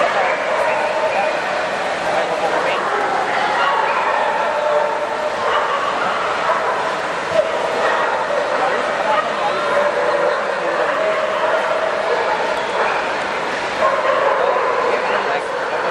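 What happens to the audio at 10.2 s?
Nothing goes wrong at 10.2 s; the audio runs through that moment intact, with no dropout, click, glitch or other fault.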